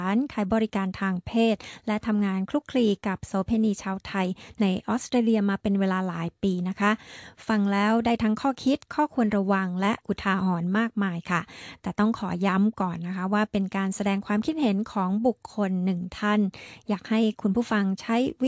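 No technical faults are audible anywhere in the clip.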